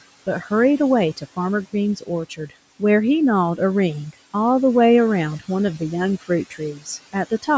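Between 1.96 and 2.09 s, again from 2.29 to 2.52 s, then from 6.5 to 6.88 s and 7.13 to 7.48 s, brief stretches of speech turn faint and swallowed, dipping about 11 to 13 dB. This is speech cut by the noise suppressor: mistaking quiet speech for the room noise beneath it, it pulled those fragments down with the background, each time for roughly a tenth to a fifth of a second.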